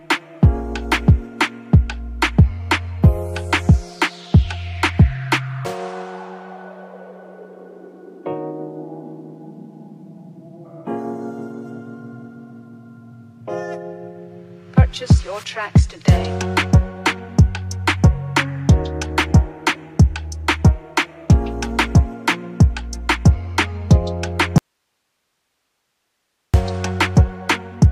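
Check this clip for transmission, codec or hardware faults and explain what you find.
One fault is present: an audio dropout to a faint residue from 24.58 s to 26.54 s. The sound cuts out abruptly mid-flow and returns just as suddenly after about 1.96 s. The gap is not silent; it holds only hiss, roughly 55 dB below the normal level. The likely cause is a loss of the wanted signal upstream, with the rest of the chain after the break staying live and passing its own noise floor.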